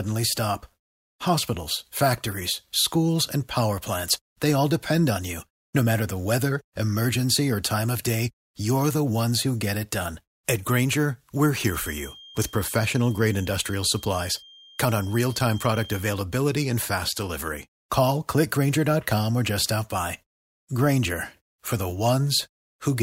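A speech recording with a feedback whistle, likely from a loudspeaker-to-microphone loop held right at the edge of feedback. From 11.62 to 16.09 s, a thin, steady tone at 3.2 kHz sits well below the speech level, swelling and fading slowly without building up.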